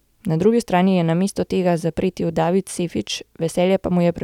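No technical faults are audible.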